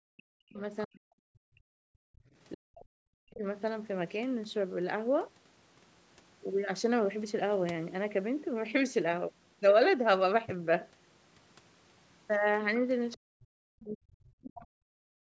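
Speech suppressed in double talk, from 0.0 to 0.62 s: the speech dips by around 40 dB for roughly half a second. This is likely the echo canceller hearing the far side on the loudspeaker at the same moment as the local talker, failing to tell the two apart, and pulling both down.

Other side's voice leaking through, from 0.81 to 0.86 s: a brief scrap of a second voice sits roughly 25 dB below the speech. This is likely loudspeaker sound that the canceller did not fully strip from the microphone.

Speech suppressed in double talk, from 0.86 to 1.84 s: the same deep cut of around 40 dB returns, covering about a second.

Background gated by the echo canceller, from 2.12 to 2.25 s: the room sound drops by about 24 dB for roughly 150 ms and then comes back. The canceller clamped the microphone hard while the loudspeaker played and released it afterwards.

Speech suppressed in double talk, from 2.53 to 3.44 s: another drop of around 40 dB, about a second in total.

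Other side's voice leaking through, from 13.12 to 13.16 s: a very short trace of the far voice, roughly 35 dB under the speech.

Speech suppressed in double talk, from 13.16 s to the end: the speech is cut down by around 40 dB for roughly two seconds.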